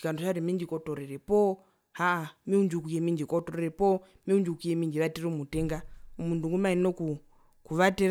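Nothing goes wrong anywhere in this bit of speech; there's simply no technical fault to point to.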